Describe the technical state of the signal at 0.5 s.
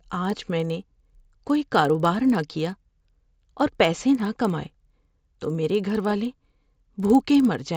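At 0.5 s the resampler restarted on every block, as throughout the clip. Each 50 ms block was converted from 16 kHz to 48 kHz separately, leaving edge errors heard as 20 Hz ticking under the speech.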